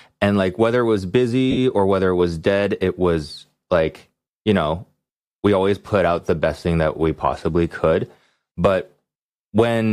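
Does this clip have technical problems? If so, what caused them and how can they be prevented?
Yes, there are lost LE Audio frames from about 1.51 to 1.58 s, a gap of roughly 60 ms that fits six dropped 10 ms frames. The LC3 decoder patches it by replaying the last spectrum with scrambled signs, so the speech briefly turns into a noisy smear that begins to fade. To prevent it, keep the Bluetooth link strong with shorter range and less 2.4 GHz interference.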